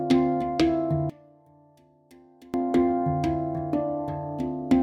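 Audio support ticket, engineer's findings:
Sound collapses about 27 dB, faint, 1.10–2.54 s. Likely one channel inverted: common content cancels on mono sum, leaving only channel difference.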